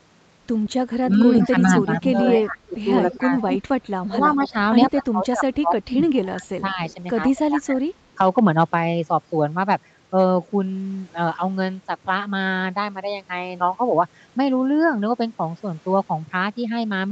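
From 0.70 to 3.59 s a second copy of the speech trails the first by about 147 ms, only about 5 dB below it, so it sounds doubled and smeared. This is an echo leak. The far end is likely playing the call on a loudspeaker, and its echo canceller let much of what its microphone picked up pass back into the call. Fainter returns of the same 147 ms echo come from 4.47 to 5.55 s at about 25 dB down and in a brief flicker at 6.90 to 6.94 s at about 30 dB down.

Overlapping the first echo, between 1.02 and 3.31 s, the speech dips in patches totalling around a second, falling by up to roughly 15 dB. From 4.08 to 7.82 s the dips are deeper, reaching roughly 25 dB and covering around two seconds in all, so parts of the speech nearly vanish. This is speech suppressed in double talk. Both sides were talking at once, and the echo canceller, unable to tell the local talker from the loudspeaker echo, likely turned both down together.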